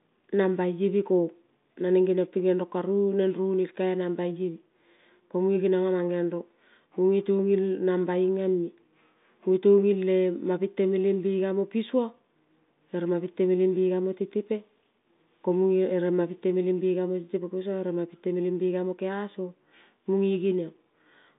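Nothing stood out on listening to this speech, which comes through an ordinary telephone-band path with nothing reaching above about 3.8 kHz.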